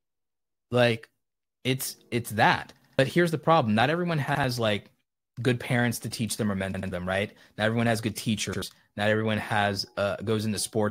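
Repeated buffer faults break the speech four times. At 2.82 s and 6.74 s, a piece about 85 ms long plays twice more, running on to 2.99 s and 6.91 s. At 4.35 s and 8.53 s, it plays once more. New audio arrived late each time, so the device replayed its last buffer. That length fits a 4096-sample buffer. Each repeat sounds as a short stutter with hard joins. Around 100 to 150 ms of speech goes missing.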